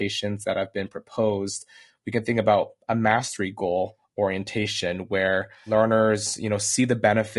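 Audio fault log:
throughout, low-delay AAC compression: the speech is plainly damaged across the whole clip, with a rough, grainy texture, noise filling the gaps between harmonics, and a top band that is either lowered or sounds synthetic. The likely cause is AAC-ELD, the low-delay AAC used in video calls, at a rate that fits about 32 kbps. Too few bits per frame leave the spectral lines coarsely coded. Unlike steady background hiss, this noise follows the voice and rises and falls with it.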